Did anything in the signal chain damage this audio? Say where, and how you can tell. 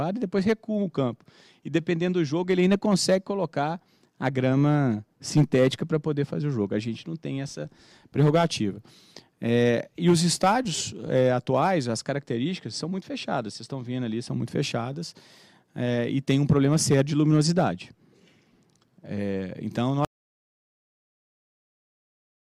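Yes. An audio dropout to silence begins at 20.05 s and runs to the end at 22.52 s. The sound stops abruptly into silence with no room tone, which likely points to a lost input link rather than a noise gate or fade.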